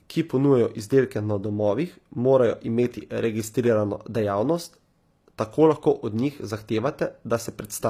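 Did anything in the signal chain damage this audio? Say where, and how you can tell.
Yes, at the codec stage, throughout the speech. The treble sounds bright but synthetic, with s sounds going gritty and lispy. That's likely HE-AAC compression, rebuilding the top end from copied lower bands. The plainly audible damage points to a low bitrate, around 24 kbps.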